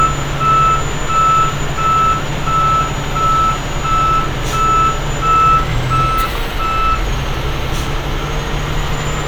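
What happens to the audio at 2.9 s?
Nothing goes wrong at 2.9 s: the sound plays through that moment intact, with no dropout, click, distortion or other fault.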